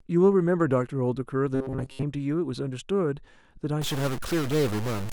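From 1.55 to 2.04 s the speech turns into a rigid, metallic buzz fixed at 133 Hz that still loosely tracks the syllables. This is robotic sound from repeated short buffers, likely caused by the software looping a roughly 7.5 ms slice while real audio is skipped, for most of that stretch.

From 3.82 s to the end, distortion rides on the speech, and quiet moments fill with noise. This points to a stuck bit, likely a data bit held at 0 or 1, knocking about half the sample values off by that bit's weight.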